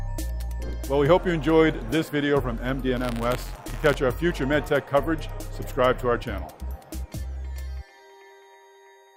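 From 2.96 to 3.96 s there is buffer tearing: writer and playback pointers cross inside each period, so a small sliver, around a fiftieth of every 10 ms buffer, replays audio from about 30 ms earlier. The result is a 100 Hz rattle, seen as regular waveform discontinuities and evenly spaced vertical lines on a spectrogram.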